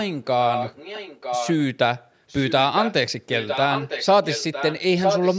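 The echo canceller on the far end's loudspeaker side likely failed to remove what its microphone picked up, so an echo leak sends a delayed copy of the speech back, trailing the original by about 0.96 s. It appears from 0.47 to 1.64 s and 2.28 to 2.93 s, somewhat quieter than the speech; from 3.39 to 4.82 s, clearly fainter; and from 4.99 s to the end, roughly as loud as the speech itself.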